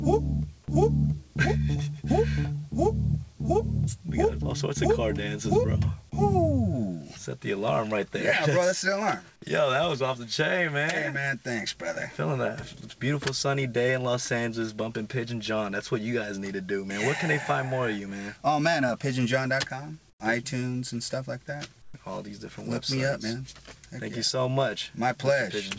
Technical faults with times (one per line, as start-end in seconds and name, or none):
20.10-20.20 comfort noise in place of the background
21.82-21.94 comfort noise in place of the background